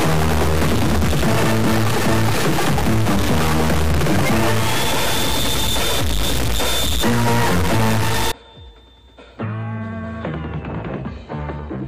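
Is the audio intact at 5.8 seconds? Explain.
No. A stuck bit runs from 0.0 to 8.32 s. One data bit likely stays fixed, shifting values by about -15 dBFS and causing harsh, buzzy distortion.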